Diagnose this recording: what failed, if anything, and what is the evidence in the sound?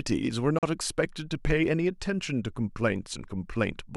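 Wireless link: sound cuts to silence from 0.59 to 0.63 s, a sharp-edged full-band gap on the spectrogram, likely a Bluetooth dropout from late, discarded packets.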